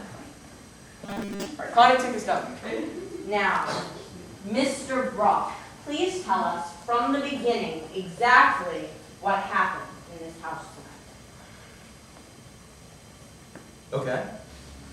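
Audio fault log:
1.06–1.46 s, robotic sound from repeated short buffers: for a bit under half a second the audio goes rigid and metallic, with a steady buzz at 200 Hz sitting on top of it while the rough contour of the sound still comes through. The likely cause is audio arriving too slowly, so the same 5 ms chunk gets played over and over for most of that stretch instead of fresh material.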